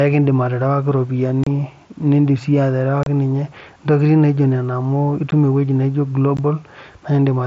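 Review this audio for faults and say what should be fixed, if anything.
Unconcealed Bluetooth headset packet loss leaves abrupt silent holes of 30 ms at 1.44 s (after "kiindim aterewaki") and 3.03 s, and of 15 ms at 5.31 s and 6.37 s. Lost headset packets were filled with silence rather than patched, and the hard edges, unlike smooth concealed fades, give them away. Better concealment and a stronger, less congested headset link would prevent this.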